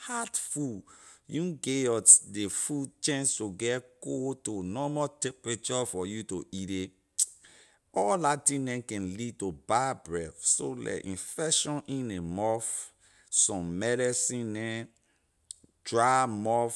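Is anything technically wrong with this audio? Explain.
No, nothing technically wrong turns up here; it's a speech recording with no faults to point to anywhere along the way.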